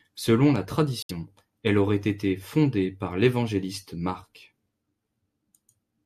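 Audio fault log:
1.01–1.11 s, corrupt frame muted: the speech cuts abruptly to dead silence for about 0.1 s, then resumes on "elle aurait été fondée" with no slip in timing. Damaged compressed frames were rejected by the decoder, and the player filled their slot with silence instead of sound, which is why the gap starts so sharply. The hole's length points to a short run of frames of about 20 ms each, while the surrounding speech keeps its place.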